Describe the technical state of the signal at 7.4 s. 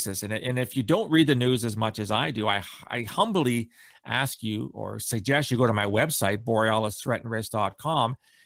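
At 7.4 s the signal is intact, with no fault audible at that moment.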